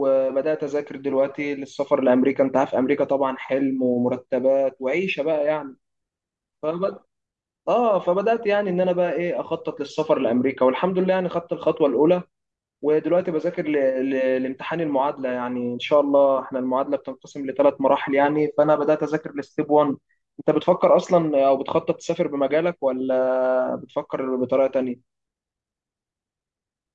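Nothing goes wrong anywhere in this speech recording, so there's no fault to point to at any moment.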